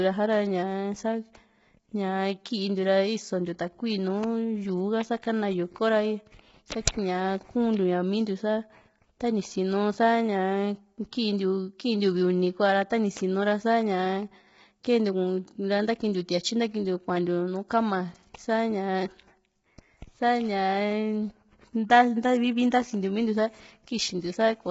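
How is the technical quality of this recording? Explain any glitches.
The technical quality is poor: heavy codec damage runs through the whole recording, and one brief glitch stands out.

Throughout, the speech sounds rough and grainy, with a hiss filling the gaps between pitch harmonics and nothing above about 7.8 kHz. This is likely low-delay AAC compression (AAC-ELD), whose short frames resolve harmonics poorly and starve each frame of bits. The damage points to a very low bitrate, around 16 kbps. On a spectrogram the harmonic stripes look smeared, the spaces between them are speckled with noise, and the image ends flatly at about 7.8 kHz.

At 14.83 s there is a short pre-echo. A sharp attack falls late in a coding block, so quantisation noise sized for the loud onset spreads about 10 ms backwards into the quiet moment before it. The result is a short hiss just ahead of the attack, which sounds softened. 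On a waveform, low-level fuzz appears just before the transient. On a spectrogram, a thin broadband smear sits immediately in front of it.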